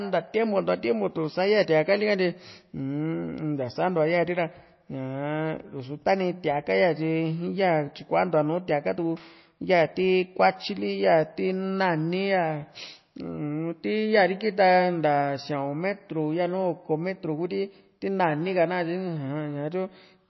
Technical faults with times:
0.00-20.30 MP3 compression

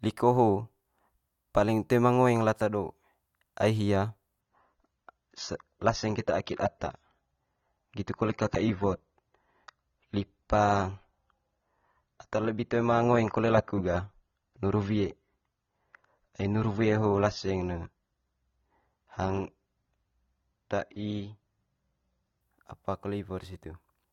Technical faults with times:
4.41-22.41 adaptive stream at a lower bitrate

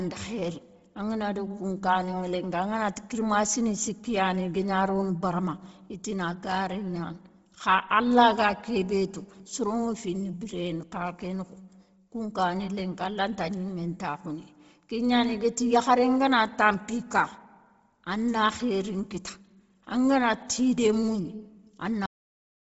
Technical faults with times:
0.00-22.75 Bluetooth LC3 compression
22.06-22.75 cut-off end

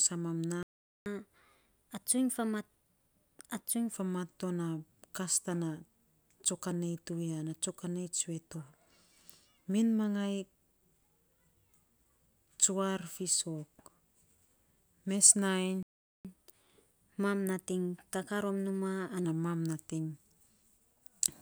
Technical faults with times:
0.63-1.06 playback stall
1.06-3.94 catch-up at higher speed
15.83-16.25 playback stall
16.25-19.25 catch-up at higher speed

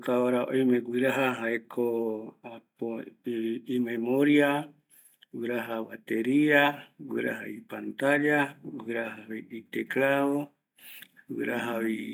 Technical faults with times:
none

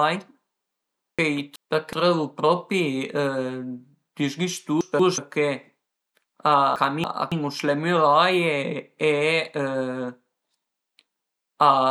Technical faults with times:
1.19-1.93 frames out of order
4.81-5.18 frames out of order
6.76-7.32 frames out of order

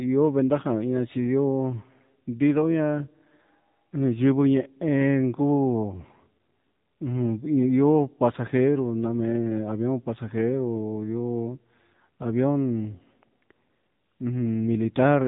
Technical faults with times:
0.00-15.27 AMR narrowband mobile codec

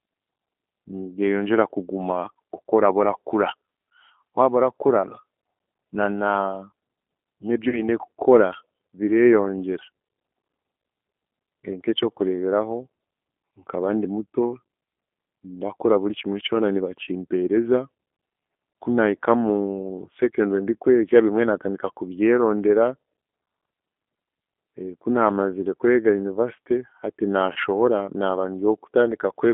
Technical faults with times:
0.00-29.53 G.729 codec
7.69-7.83 VoIP packet loss concealed by the speech codec
27.53-27.59 VoIP packet loss concealed by the speech codec

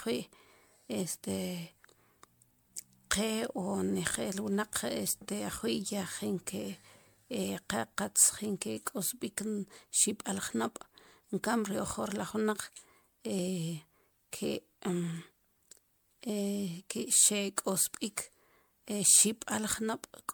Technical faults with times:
0.00-20.33 generation loss

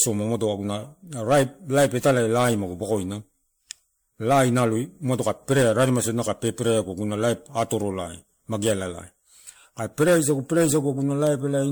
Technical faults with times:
0.00-11.71 generation loss

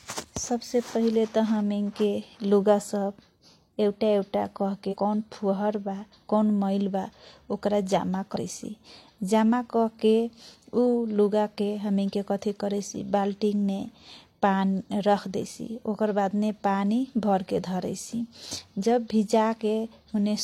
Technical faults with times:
4.88-4.97 compressed frames skipped
8.32-8.36 compressed frames skipped

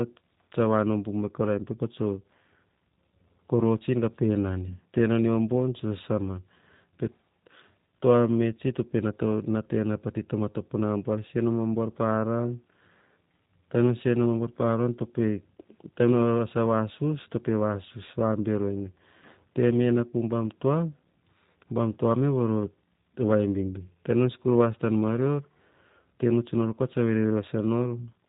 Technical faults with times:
0.00-28.29 G.729 codec

